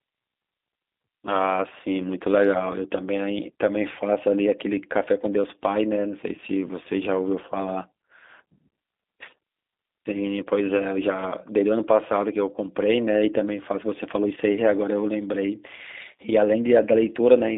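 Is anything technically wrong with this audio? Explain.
Yes. G.729 codec coding runs throughout: the speech is resynthesised from a vocal tract model, pitch predictor and sparse pulses, consistent with an 8 kbit/s stream, and squeezed into a 250 Hz to 3.7 kHz band, so it sounds muffled, rough and plainly synthetic.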